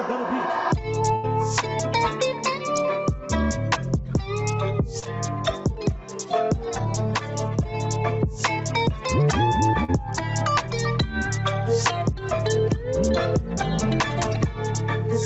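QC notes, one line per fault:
Throughout: gain pumping. The background rises in every gap and drops by roughly 10 dB as each loud sound arrives, so level breathes in step with the sound and the dynamics are flattened. The likely cause is input gain set far too high, with a fast limiter or compressor clamping down on each peak. Unlike a steady noise floor, this background level moves up and down in step with the sound.
1.15 to 1.25 s: burst of packet loss. Roughly 80 ms of audio never arrived in time, and the receiver bridged the hole by extending the last sound for about 80 ms while fading it down, giving a held buzz or a decaying hiss. Playback then picks up further along, with that stretch of sound skipped.
4.99 to 5.04 s and 9.84 to 9.99 s: short concealed packet loss. Two small holes, about 20 ms and 40 ms of missing audio, were patched by continuing the preceding sound, 27 ms and 41 ms of synthesized fill, then crossfading back. 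At 9.84 s a further 13 ms was dropped as playback caught up. Each is heard as a quick smear or wobble rather than a held buzz, and a brief sound there can disappear entirely.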